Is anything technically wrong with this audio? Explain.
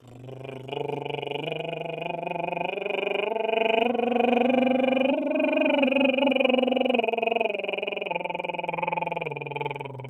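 Yes. A noise suppressor designed for speech has been applied to this music. Throughout the clip, it treats sustained tones, ambience and reverb as if they were noise and pulls them down, while attacks pass through largely intact. The applied gain reduction rises and falls by about 5 dB as the material changes, so the music pumps and breathes unevenly, with held notes and decays thinning out instead of sustaining naturally.

There are also four distinct spots where the suppressor cut the sound harder than the surrounding material: 0.00 to 0.72 s, dipping by up to about 9 dB; 8.26 to 8.61 s and 9.37 to 9.55 s, each up to about 6 dB; and 9.74 s to the end, again up to about 6 dB. In each, the steady or decaying content was classified as noise, so its level sinks and tails are truncated, while transients are left standing.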